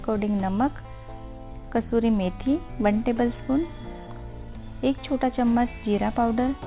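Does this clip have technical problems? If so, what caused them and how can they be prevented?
No, there's nothing here to fix: it just sounds like an ordinary call line, with the top end stopping at 4 kHz the way you'd expect from a G.711 A-law connection at 64 kbps.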